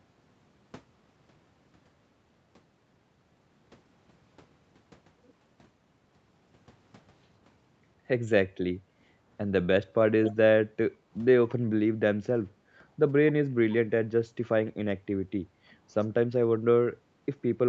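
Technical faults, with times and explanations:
10.24–10.35 s, echo leak: a faint delayed copy of the speech trails by 110 ms, roughly 10 dB down. Likely an echo canceller letting far-end sound slip back.
14.65–14.77 s and 15.3–15.4 s, background gated by the echo canceller: room sound briefly drops by about 20 dB, then about 17 dB, as the microphone is clamped.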